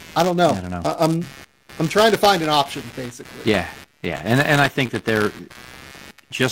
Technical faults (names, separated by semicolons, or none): computer activity noise; buffer tearing; lost LE Audio frames